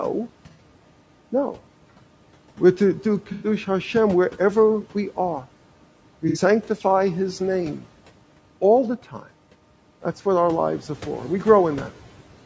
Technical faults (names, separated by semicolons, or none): low-delay AAC compression; AAC frame loss with concealment